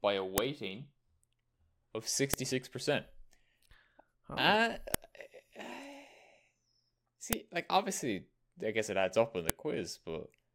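Speech, with five sharp, loud clicks at 0.38 s (just after "by a"), 2.34 s (just before "six percent"), 4.94 s, 7.33 s (just before "like obviously I guess") and 9.50 s, each lasting about a millisecond. This is the signature of a file header played as audio: segments were concatenated with their WAV headers left in, so those header bytes are decoded as samples and snap out regardless of the underlying speech.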